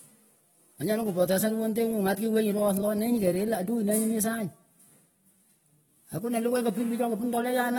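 Speech runs through the whole clip with a dull, smeared quality and a warbling, fizzy texture on sibilants and held sounds. Nothing sounds above 19.4 kHz. The likely cause is AAC compression, and the damage fits a low bitrate near 24 kbps.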